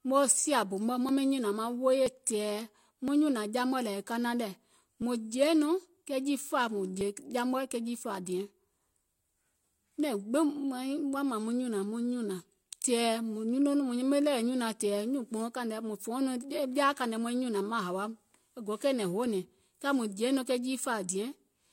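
This speech clip has a tiny click or skip about once a second at 1.09, 2.06, 3.08, 4.04, 5.02, 6.04, 7.01 and 8.02 s. The one at 5.02 s falls between "kanaŋ lɛ̀" and "mùŋ jèeiŋ". These are overlap between stream segments. Successive 1.0 s segments claimed overlapping time stamps, so the player trimmed 26 to 40 ms of sound that was never duplicated, and the waveform jumps at each boundary.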